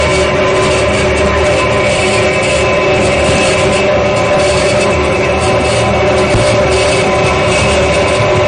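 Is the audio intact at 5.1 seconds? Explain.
No. At 5.1 seconds the audio is damaged by two faults that run through the whole clip. The first is hard clipping. The sound is overdriven by about 27 dB, so roughly a third of the waveform is pushed past the ceiling and sliced flat. Those squared tops throw harmonics high up the spectrum, giving a harsh, constant fuzz on every loud passage. On a waveform display the peaks form a solid flat-topped block, and a spectrogram shows broadband energy smeared upward above each loud event.

The second problem is a watery, swirling texture with metallic chirps on sharp or hissy sounds. Attacks are smeared, and nothing at all survives above 9.6 kHz. That pattern is likely MP3 compression at a starved bitrate, consistent with something around 40 kbps. Short of bits, the encoder has cut the treble at a fixed point and zeroed out weaker frequency lines, which flicker on and off from frame to frame. 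On a spectrogram this appears as a hard horizontal ceiling at 9.6 kHz, with patchy, blocky holes speckling the remaining upper bands.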